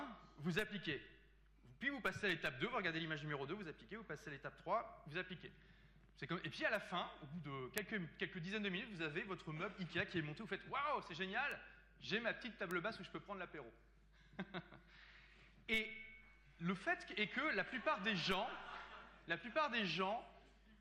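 At 0.59, 7.78, 11.52 and 12.71 s there is a bit error spike: a single sample whose value jumps by a power of two and snaps straight back, as if one bit flipped in storage or on a digital link. Each is a lone, sharp tick spread across the whole spectrum, peaking around -30, -11, -30 and -23 dBFS. The loudest is at 7.78 s. Unlike a dropout click, nothing goes missing around these ticks and they bear no relation to the surrounding sound.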